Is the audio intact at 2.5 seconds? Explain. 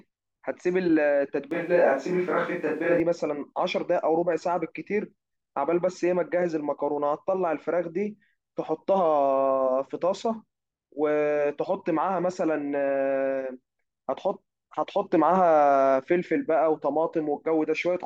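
No. From 1.51 to 3.0 s there is a switch to a distant microphone: the speech suddenly turns roomy and hollow, with thinner bass and room noise about 35 dB below it, likely because the close microphone dropped out. Unlike added reverb or low-cut filtering, it starts and stops abruptly.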